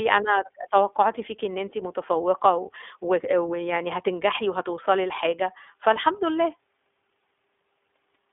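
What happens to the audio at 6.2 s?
At 6.2 s the speech carries iLBC codec damage, present throughout: independently coded 20 ms frames and nothing above 3.8 kHz give a plainly rough, synthetic, narrowband sound.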